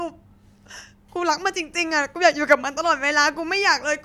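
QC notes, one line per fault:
Nothing to flag here; the speech comes through without any technical problems worth noting.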